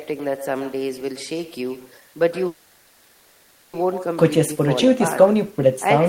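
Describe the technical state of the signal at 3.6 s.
At 3.6 s the signal is inside a call audio freeze running from 2.47 to 3.75 s. Instead of new speech, the receiver stretches the last sound into a decaying buzz or hiss for about 1.26 s, likely because delayed packets left the jitter buffer empty. When audio resumes, nothing has been lost, only pushed later. On a spectrogram this shows as a smeared, steady band with no new structure; the waveform envelope thins out without ever reaching silence.

Echo with no canceller is present here as well. A quieter, thinner copy of the talker, about 13 dB down, follows the speech by roughly a tenth of a second. On a spectrogram each speech event has a faint duplicate just behind it, and the waveform carries a low trailing shadow after each burst.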